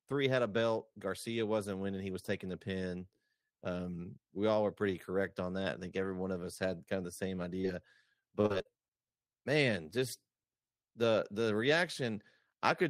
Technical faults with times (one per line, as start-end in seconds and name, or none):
7.61-7.65 short concealed packet loss
8.19-8.92 repeated packet loss (robotic sound)